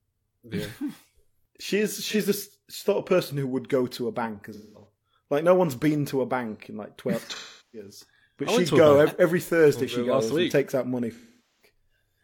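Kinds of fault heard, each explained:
AAC frame loss with concealment: Parts of the coded stream went missing. The decoder patched each gap from the last good spectrum. Four gaps run from about 43 to 427 ms. The shortest smears briefly. Longer ones, after "go to a bank" and "and takes out money", fade toward silence.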